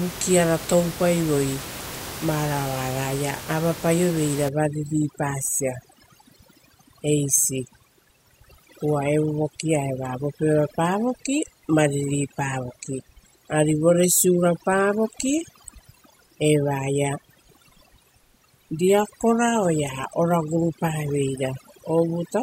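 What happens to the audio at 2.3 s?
Nothing goes wrong at 2.3 s: the speech plays through intact, with only the room's own background noise sitting about 13 dB beneath it.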